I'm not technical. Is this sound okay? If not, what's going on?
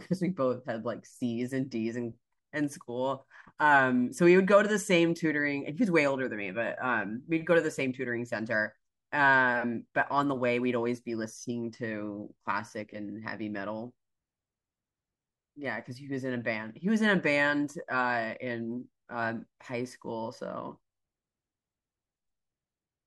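Yes, the recording is technically sound, with nothing in the signal that stands out as a problem.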